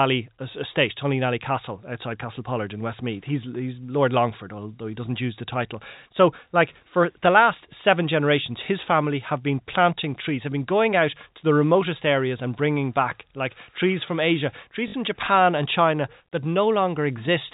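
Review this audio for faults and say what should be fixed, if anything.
At 14.88 to 14.94 s there is a 60 ms dropout handled by packet loss with last packet repeated. The receiver replays the final good packet until fresh audio arrives. The run buzzes as a brief robotic stutter. The length fits three lost 20 ms packets. On a waveform, one identical block recurs. A spectrogram shows the repeated block every 20 ms, inside the 4 kHz ceiling of the G.711 telephone coding. Packet loss concealment that interpolates the missing audio, backed by forward error correction or redundant packets, would prevent it.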